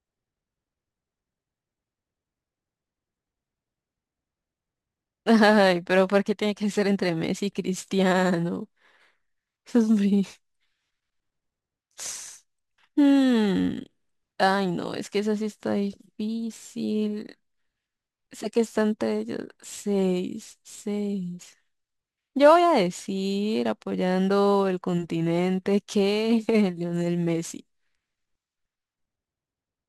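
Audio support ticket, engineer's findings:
Imaging from sample-and-hold upsampling, throughout: metallic fizz tracking the speech, images about 25 dB down at 11 to 22 kHz. Samples repeated without smoothing, which fits a 22 kHz source upsampled to 48 kHz.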